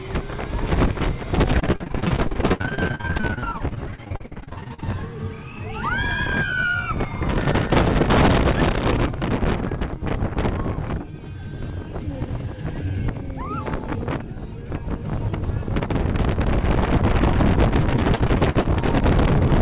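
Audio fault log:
1.60–4.84 s and 17.80–18.78 s, repeated packet loss (robotic sound): the audio breaks up into rapid dropouts, each plugged by stretching the preceding sound, giving a choppy texture with pieces missing. The first stretch is dense: holes up to 67 ms recur throughout, with close to half the span concealed. The second is lighter, with gaps up to 51 ms and roughly a quarter concealed.
7.38–8.92 s, section at the wrong speed: this passage runs at 1.5 times normal speed, so it sounds hurried and raised by about seven semitones, with pitch and tempo shifted together. The cause is likely playback or editing against a mismatched clock, since both shift by the same ratio and return to normal at 8.92 s.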